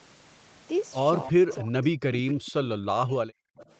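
From 1.32 to 2.54 s and again from 2.76 to 3.35 s, the speech dips by up to about 40 dB and breaks into pieces. This is speech suppressed in double talk. The echo canceller likely treated the talker as echo while both sides spoke. From 1.49 to 1.56 s and 3.57 to 3.75 s, a faint copy of the speech returns 267 ms late, about 20 to 25 dB down. This echo leak is likely leftover loudspeaker echo the canceller missed.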